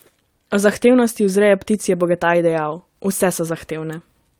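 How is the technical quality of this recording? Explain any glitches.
No glitches or technical faults are audible here.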